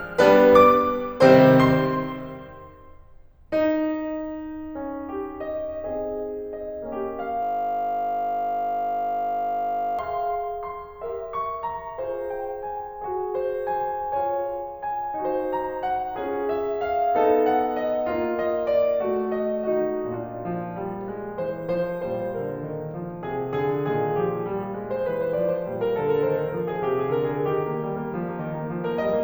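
From 7.43 to 9.99 s the music gives way to a system hang loop: playback froze while the audio hardware kept replaying its ring buffer, so a single 20 ms slice repeats exactly, well over a hundred times, producing a steady 50 Hz buzz.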